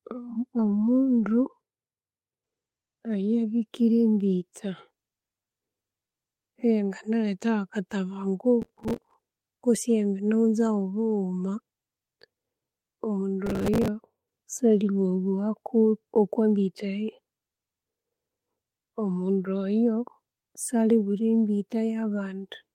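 The processor fell behind on its small audio buffers in this speech recording, missing dozens of deadlines in a row, which is processor overload crackle. Each missed slot was filled with stale audio, and the hard joins produce a gritty, tearing crackle over the speech from 8.62 to 9.14 s and again from 13.46 to 13.88 s. The rapid grain of the bursts fits buffers of roughly 5 ms.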